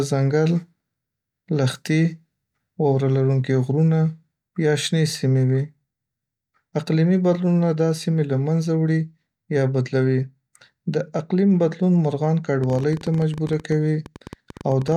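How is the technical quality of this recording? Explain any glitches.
The recording's one glitch comes near the end. A train of clicks runs from 12.64 to 14.93 s, just after "د اقلیم بدلون مرغان": about thirty similar pops at an uneven 13.6 per second, peaking roughly level with the speech, likely from electrical interference or a faulty connection injecting repeated pulses.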